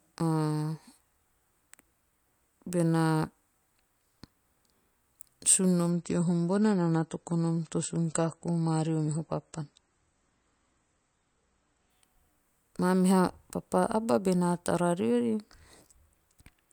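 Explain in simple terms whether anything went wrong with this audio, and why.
Something did go wrong: from 5.9 s to 11.9 s the speech switches abruptly to an adaptive stream at a lower bitrate. The player dropped to a smaller, more heavily compressed version of the audio, most plausibly because the connection slowed. For those six seconds the treble above about 8.3 kHz is cut off, so the speech sounds duller and muffled, with a swirly, watery texture. There is no gap or dropout. At 11.9 s the full clarity snaps back.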